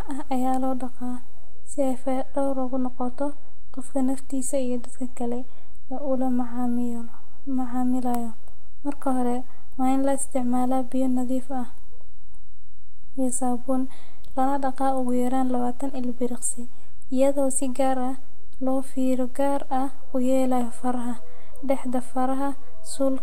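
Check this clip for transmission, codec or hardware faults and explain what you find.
There is one fault, a DC offset present for the whole of this speech clip. A constant shift moves the entire waveform away from zero, which eats into headroom and leaves steady energy at the very bottom of the spectrum. It isn't heard directly as a tone or noise.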